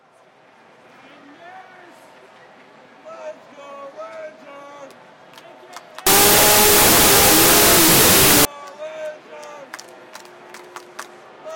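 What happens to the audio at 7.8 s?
At 7.8 s the audio is inside a wrong sample width fault from 6.07 to 8.45 s, where 32-bit float data read as 16-bit integers become loud noise. Unlike a plain noise burst, the original sound stays buried underneath, playing at half speed and an octave low.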